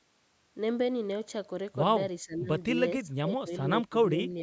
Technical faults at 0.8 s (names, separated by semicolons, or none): none